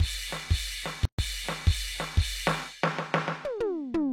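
At 1.05 s the music drops out for about 133 ms, returning at 1.19 s, a gap at a join of encoded pieces. Two separately encoded segments were butted together without trimming, so the first one's padded final frame and the next one's encoder start-up silence both remain. It sounds like a brief stutter before the music resumes where it left off. A waveform shows a flat stretch with abrupt, slightly smeared edges, and a spectrogram shows a full-band vertical blank column.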